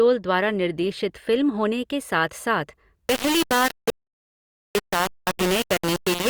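From 3.08 s to the end, the speech turns harshly grainy: low bit depth without dither, likely rounding to about 3 bits. Unlike dither hiss, the distortion tracks the signal and is nearly as loud as it. From 3.90 s to 4.75 s, an audio dropout to silence wipes out 0.85 s. It is dead digital silence with no room tone, most likely from a lost input.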